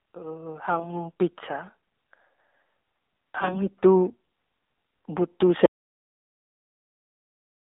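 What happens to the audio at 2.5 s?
At 2.5 s the speech is still inside the AMR narrowband mobile codec, which runs through the whole clip. The line passes only 200 Hz to 3.7 kHz. Few pulses drive the vocal tract model, so the voice sounds plainly buzzy and synthetic, which fits a low rate near 7.4 kbps.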